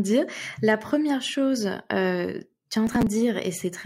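From 2.87 to 3.07 s, just after "euh tu es en", the speech breaks into processor overload crackle. Roughly fifteen deadlines are missed, a pattern that fits buffers of around 10 ms. Each late buffer is skipped, leaving hard-edged gaps heard as gritty tearing until the load eases.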